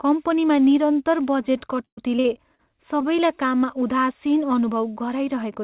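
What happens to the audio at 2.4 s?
At 2.4 s the speech is in the middle of a stretch of repeated packet loss (robotic sound), running from 1.76 to 2.7 s. The audio breaks up about five times. Each hole is bridged by stretching out the preceding sound, so about a quarter of the span is patched, roughly 217 ms in total. The longest gap is 118 ms. The result is choppy, with fragments missing, over a band that stops at 4 kHz, which fits G.711 mu-law.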